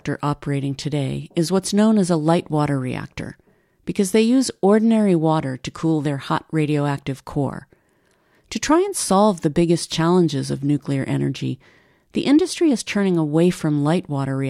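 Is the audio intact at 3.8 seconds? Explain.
Yes, the speech at 3.8 seconds plays through intact, with no dropout, click, distortion or other fault audible at that moment.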